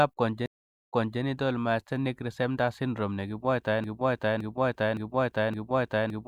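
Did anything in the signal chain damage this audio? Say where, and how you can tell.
Yes, two faults. The first is a stream reconnect at the network stage, from 0.46 to 1.21 s. The audio drops to silence for about 464 ms. It then resumes at "myasthenic syndrome", but about 287 ms earlier than where it broke off, so a short stretch is heard twice. That backward jump gives it away. The connection failed, the player went quiet, reconnected, and a fresh decoder picked up from data the server sent again.

The second is a broken-record loop, from 3.84 s to the end of the clip. A 565 ms fragment repeats exactly, back to back, four times. The seams fall at the same point each pass, with no variation. This is a stall, most likely in the stream or playback buffer. Nothing new arrived, so the last fragment held was replayed. Whatever should have followed 3.84 s is lost.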